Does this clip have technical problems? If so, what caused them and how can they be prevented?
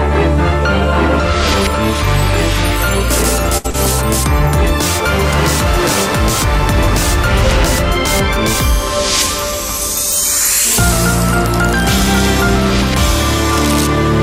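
Yes. From 3.57 to 3.66 s a sound hangs on unnaturally, stretched with a slight buzz or dip. This is a short stall from a late packet: the jitter buffer ran dry, so the receiver extended the last audio for about 69 ms and then resumed exactly where it stopped. Nothing is lost, but playback now runs 69 ms later. A jitter buffer with a little more headroom, or one that adapts to varying delay, would absorb late arrivals like this without stalling.

Just after, from 3.70 to 3.76 s, there is a quick smear or wobble. This is short concealed packet loss: about 40 ms of audio never arrived in time, and the receiver covered the gap with roughly 34 ms of synthesized continuation before blending back into the real signal. Forward error correction or packet redundancy, along with a more stable network path, would reduce losses like this.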